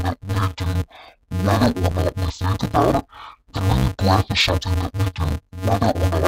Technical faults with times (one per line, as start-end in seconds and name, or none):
0.00-6.27 interleaved audio read as planar